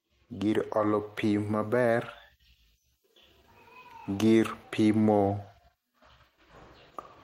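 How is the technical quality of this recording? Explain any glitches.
The recording has one clear fault at the start. From 0.05 s to 2.13 s there is automatic gain rising. The gain control judged the input too quiet and raised its level by about 4 dB over those two seconds. Speech and background noise swell up together.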